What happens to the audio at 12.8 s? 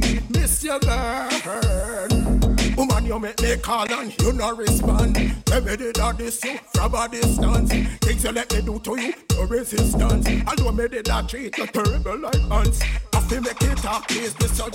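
Nothing goes wrong at 12.8 s; the audio runs on intact through that point with no dropout, click or other fault.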